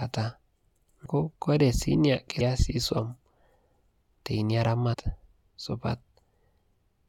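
Speech with compressed frames skipped three times. The audio jumps ahead about 300 ms at 1.05 s, about 400 ms at 2.39 s, and about 150 ms from 4.93 to 4.95 s. The jumps fit whole 23.2 ms frames going missing.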